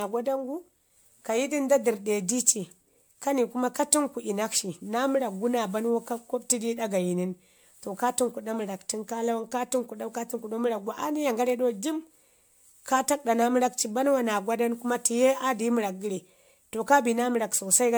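Across the whole speech clip the sound is swirly and hollow, with a smeared, watery texture and softened consonant attacks, even though content extends up to about 20.1 kHz. That combination points to generation loss: the audio was likely decoded and re-encoded around five times through a lossy codec consistent with MP3 at 128 kbit/s. Each pass requantised the audio on a shifted frame grid, so noise and spectral gaps piled up beyond what one encode would leave.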